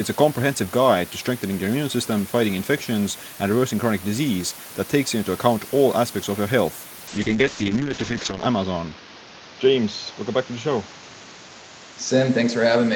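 At 7.08 s the call's bandwidth estimate collapses and the encoder is pushed from 32 kbps down to 7 kbps. That is a call bitrate drop lasting to the end of the clip, with 1.38 s spent at the lowest rate. Starved of bits, the codec quantises the speech coarsely and narrows its coded band from 20 kHz to 8 kHz. The sound turns muffled and watery, losing its upper detail, while the room noise sits about 21 dB beneath the speech.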